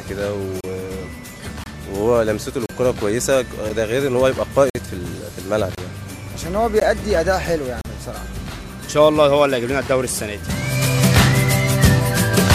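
Hard-edged holes of silence, between about 8 and 52 ms long, cut the sound at 0.61, 1.64, 2.66, 3.69, 4.70, 5.75, 6.80 and 7.81 s, about once a second. This is a gap between stream segments: timestamps on consecutive one-second segments leave space, which the player fills with silence, losing no audio.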